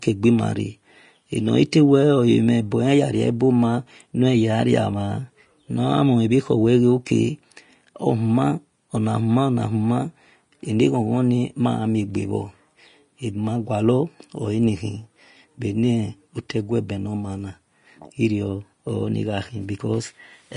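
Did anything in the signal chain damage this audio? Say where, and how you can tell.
Yes, at the codec stage: throughout, the speech has nothing above 10.5 kHz and grainy, hissy treble, likely low-bitrate Vorbis compression. A plain lowpass would stay clean rather than turning detail to noise.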